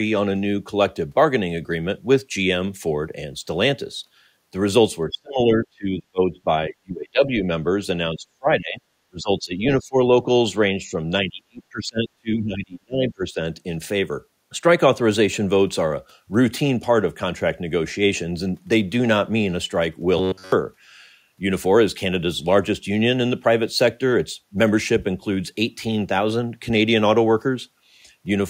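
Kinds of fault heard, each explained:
Speech suppressed in double talk: Between about 5.1 and 13.4 s the speech repeatedly dips, thins or drops out in pieces. The deepest cuts are around 35 dB. The likely cause is an echo canceller that cannot tell both sides apart, so it turns both down.
Robotic sound from repeated short buffers: From 20.18 to 20.52 s the speech turns into a rigid, metallic buzz near 94 Hz. That fits a block of about 10.7 ms played over and over. The likely cause is new audio arriving too late, with the real audio skipped.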